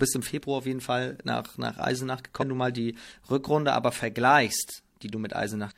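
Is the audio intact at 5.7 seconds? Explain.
No. From 5.67 to 5.72 s, near the end of the clip, there is damaged data in a compressed stream. Some of the encoded bytes were corrupted, so the decoder could not read those frames properly. It lost sync and had to search for the next valid frame header. The result is a brief chirp, squawk, click or short hole. On a spectrogram it shows as a short smear of broadband or oddly patterned energy, and the waveform has an abrupt, discontinuous segment.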